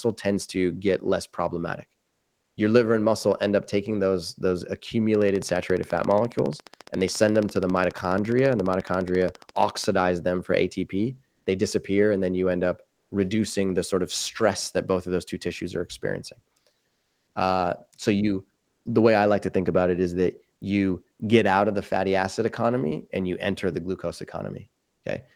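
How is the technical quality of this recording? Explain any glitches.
The speech comes through with two kinds of glitch.

From 5.15 to 9.85 s there's a train of clicks: regular ticks about 14.5 times a second, some seventy in all, peaking a bit above the speech. Likely interference or a faulty connection injecting pulses.

Comfort noise replaces the background at 2.03 to 2.57, 11.31 to 11.45, 12.93 to 13.11, 16.87 to 17.35 and 18.61 to 18.85 s. The real room tone, already around 53 dB below the loud parts, turns into flat synthetic hiss, up to about 4 dB louder. That's likely discontinuous transmission filling pauses, consistent with Opus DTX.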